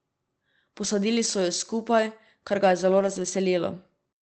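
At 0.83–0.85 s, just before "so ju", and again from 2.99 to 3.29 s after "kar ga je zelo", packets were lost and the decoder rebuilt them from forward error correction, so there is no gap. The low-bitrate copies make these stretches rougher and noisier against the 8 kHz Opus call sound.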